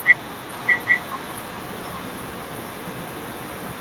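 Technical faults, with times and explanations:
0.53 to 3.8 s, echo leak: a second copy of the speech trails the original by 0.81 s. It is about 5 dB quieter than the direct sound. The likely cause is a far-end loudspeaker whose echo canceller let its microphone pickup return.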